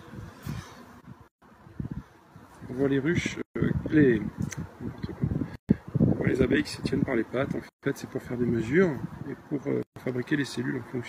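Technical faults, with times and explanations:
1.28, 3.42, 5.55, 7.69 and 9.83 s: gap at a join of encoded pieces. The sound drops out for about 136 to 139 ms at each join, with smeared edges, then resumes where it stopped. It looks like 2-second chunks were encoded separately and joined with their start delay and end padding left in.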